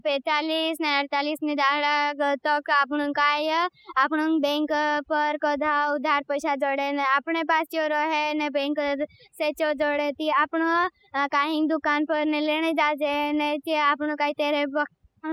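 Overdone noise removal runs through the whole speech clip. The noise reducer was pushed so hard that any frequency band sitting near its noise estimate gets pulled down or switched off, taking the quieter parts of the voice along. Pauses fall to near silence dotted with twinkling specks. Unlike a noise gate, which shuts everything at once between phrases, this works band by band, so isolated tones flicker on and off.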